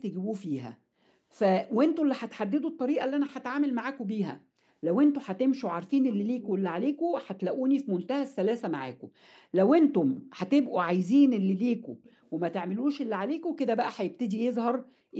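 At 6.08 to 6.15 s, 6.4 to 6.5 s and 12.03 to 12.3 s, short echo-leak scraps trail the speech by about 270 ms, most audible at 6.4 s. These are likely residual echo from a loudspeaker whose echo canceller let the microphone pickup through.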